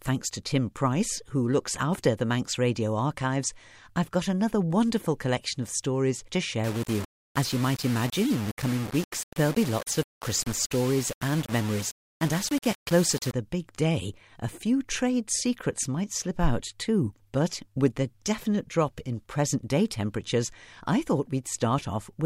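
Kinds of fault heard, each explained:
Low bit depth without dither: from 6.64 to 13.33 s, between "collection of stories to" and "the big day a", the speech turns grainy and rough, with a gritty distortion that tracks the voice and sits only about 15 dB below it. The softer sounds break up and sputter toward silence. The likely cause is coarse rounding to very few levels with no dither, which fits roughly 5-bit audio, so the error stays locked to the signal.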